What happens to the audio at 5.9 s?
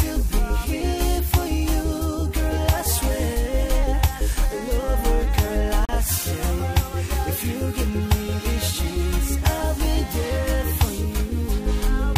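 A hard-edged hole of silence cuts into the sound from 5.85 to 5.89 s, about 35 ms long, with no material missing on either side. It is a gap between stream segments, which fits 6-second segments: the second segment's timestamps start slightly late, and the player fills the space with silence.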